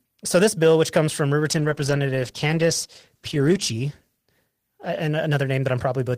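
At 1.57 s, just after "bill which comes from", a call bitrate drop sets in: the bandwidth estimate falls and the encoder drops from 32 to 13 kbps, bottoming out for about 1.8 s. Coarser coding leaves the speech rough, watery and muffled until 6.01 s.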